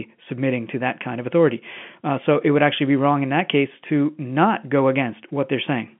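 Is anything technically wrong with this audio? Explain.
No, this is ordinary telephone-line speech, and the G.711 coding behaves as expected for a 64 kbps fixed-line channel: the band runs from about 150 Hz to 3.4 kHz, nothing reaches above roughly 3.7 kHz, and any coding texture is faint at most.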